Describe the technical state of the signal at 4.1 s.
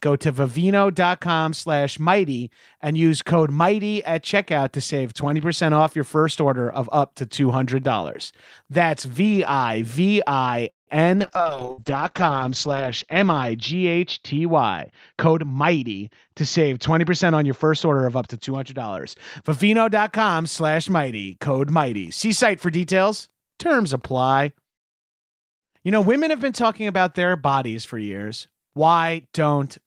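At 4.1 s the speech signal is intact, with no dropout, clipping, glitch or other technical fault audible at that moment.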